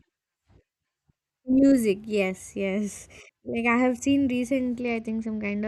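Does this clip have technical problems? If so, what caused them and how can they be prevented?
Yes. After "I have seen", from 4.81 s to the end, a Bluetooth SBC bit pool drop dulls the treble and adds gritty noise. This fits a bit pool cut from 28 to 10, about 84 kbps. Keep the link clear by moving closer or reducing 2.4 GHz congestion.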